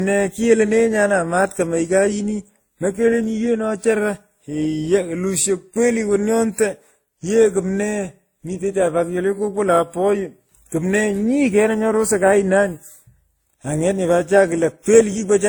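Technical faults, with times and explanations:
Throughout, transcoding between lossy codecs: the speech was likely encoded twice, with a low-rate stage consistent with Opus near 32 kbit/s and then WMA 1 near 64 kbit/s. The second coder spends bits re-encoding the first one's artefacts and adds its own, so both layers are heard together, with nothing above 20.1 kHz.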